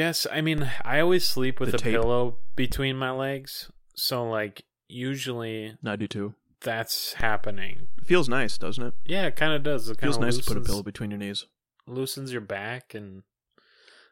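At 0.58 s the waveform's zero line jumps by about -22 dBFS, a DC step, and holds until stepping back at 2.72 s, just before "my legs". A second step of about -20 dBFS begins at 7.20 s after "I do too that's" and returns at 10.73 s before "between your knees loosens". Each jump and return is a low thump while the speech carries on intact. Unlike a dropout click, nothing is lost, and unlike rumble, the offset is silent between edges.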